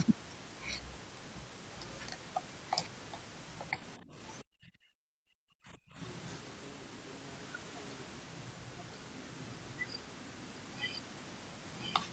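At 3.98 s the talker's level drops for about a fifth of a second, by roughly 15 dB, then recovers until 4.42 s. From there to 6.0 s it's far worse, with the sound pushed down by as much as something like 40 dB for most of that stretch. That's most likely speech suppressed in double talk: with both sides talking at once, the echo canceller couldn't tell this voice from loudspeaker echo and clamped down on both.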